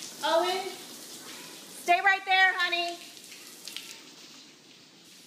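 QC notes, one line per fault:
3.92–5.05 s: channel delay (comb filtering). One channel lags the other by only a couple of samples, about 0.05 ms, and the mono sum cancels near 10 kHz, dulling the top end. A spectrogram shows a fixed dark notch band there; the waveform looks unchanged.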